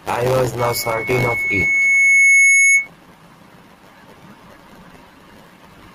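Speech with loudspeaker feedback squeal from 0.58 to 2.88 s: a 2.2 kHz tone swells over about two seconds to roughly 10 dB above the speech as the mic-speaker loop runs away.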